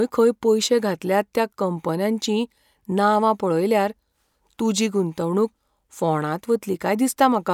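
No technical faults are audible.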